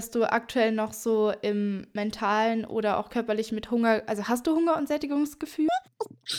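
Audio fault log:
5.69 to 6.39 s: audio read two samples at a time (double speed). The last part of the speech suddenly races at twice the pace. It jumps up a full octave, 12 semitones, and sounds chipmunk-like. The reader is treating each pair of samples as one frame. It assumes two channels or samples twice as wide. So the material plays through in half the time.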